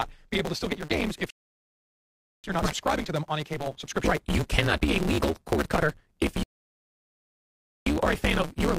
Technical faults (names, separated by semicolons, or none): block size mismatch (truncated); rebuffering stall